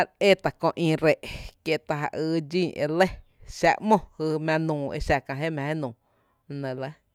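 Nothing goes wrong anywhere in this bit of speech, so there's no fault to point to at any moment.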